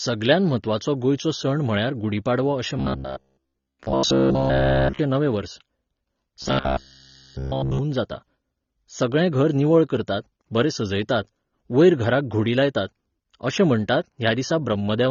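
From start to finish the speech sounds dull and smeared with a fizzy edge, and nothing is left above 6.9 kHz, likely AAC compression at a rate near 24 kbps.

From 2.77 to 4.99 s, right after "म्हळ्यार गुढी पाडवो अशें" and ending before "नवें वर्स", and again from 6.42 to 7.79 s, the speech turns into a rigid metallic buzz at 66.8 Hz. This is robotic sound from repeated short buffers, likely a 15 ms slice repeated throughout.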